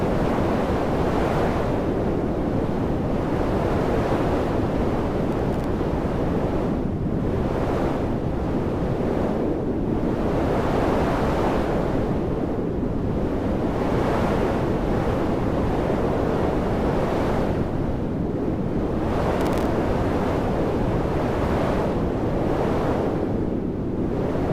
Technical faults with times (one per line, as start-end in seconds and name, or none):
5.32-5.64 processor overload crackle
19.40-19.66 processor overload crackle